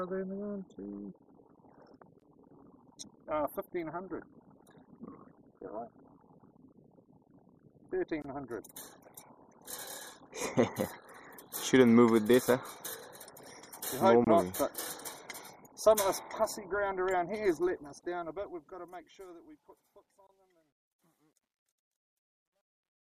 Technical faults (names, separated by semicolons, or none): gap at a join of encoded pieces; truncation distortion on a fade